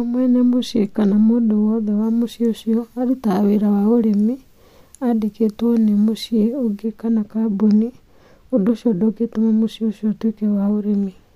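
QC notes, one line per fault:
2.04–6.84 s, pre-emphasis left on: treble boost never undone by de-emphasis, fitting the CD 50/15 µs curve, lifts 10 kHz about 8 dB, so speech turns thin, bright and sibilant before "kana kambuni".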